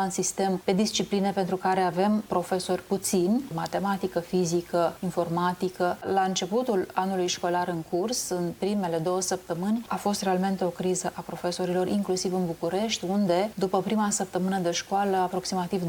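No technical faults are audible.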